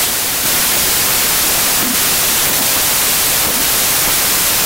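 Loud noise buries the speech throughout, slowed to 0.667 times speed and lower in pitch: a wrong sample width, fitting 24-bit samples read as 16-bit.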